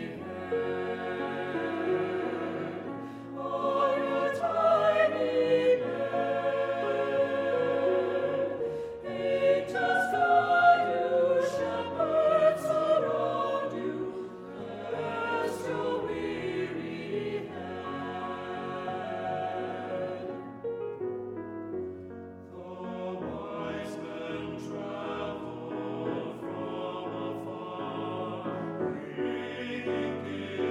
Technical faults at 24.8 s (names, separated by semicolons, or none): none